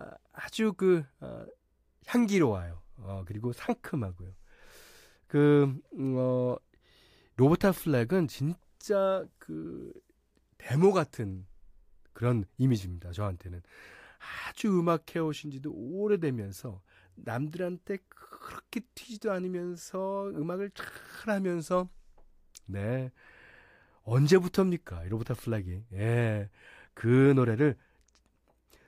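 Speech recording with no audible technical faults.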